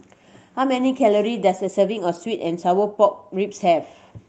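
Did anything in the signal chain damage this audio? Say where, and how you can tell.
Yes. Clock drift between sender and receiver runs through the whole clip, at the network and jitter-buffer stage of the Opus call path. The sender's clock runs roughly 4 percent fast, so packets arrive slightly quicker than the receiver plays them out and the buffer keeps filling. You can hear it as a pacing that never quite settles. The speech carries a faint restlessness throughout, heard through the call codec's band limit near 8 kHz.

Repeated timing corrections run from 0.23 s to 4.12 s, with playback pushed to 104 percent speed. This is the receiver's buffer management fighting the drift. To keep latency from growing, it keeps trimming short slices of audio, always in the same direction but at irregular spacing. Each cut is tiny, so the speech sounds slightly hurried, with small uneven hiccups in rhythm rather than clear dropouts.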